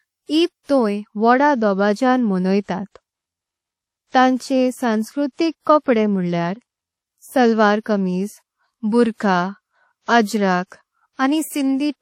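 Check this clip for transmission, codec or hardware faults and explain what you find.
One codec fault is present, and it runs through the whole speech clip. The likely cause is WMA compression from an early Windows Media Audio encoder at a low rate, around 48 kbps by the sound of it. A transform codec like this codes the audio in long blocks, so quantisation noise smears across tens of milliseconds and faint spectral detail is discarded. The result is plainly audible: a ringing, washy texture with hiss that swells and fades with the voice, and no content above 16.1 kHz.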